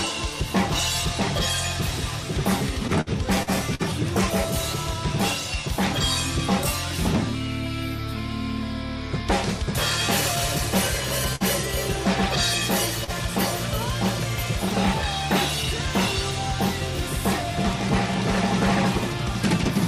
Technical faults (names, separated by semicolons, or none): repeated packet loss (robotic sound); burst of packet loss; short stall from a late packet